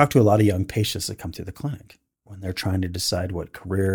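A short speech recording with no audible technical faults.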